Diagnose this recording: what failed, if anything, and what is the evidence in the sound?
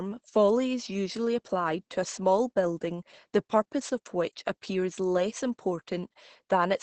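The codec's the culprit: Opus voice compression, running hard. The speech is band-limited the whole way through, with nothing above about 8.7 kHz, and it sounds muffled, hoarse and a bit robotic. That fits SILK in wideband mode at around 10 kbps, coding the excitation very coarsely.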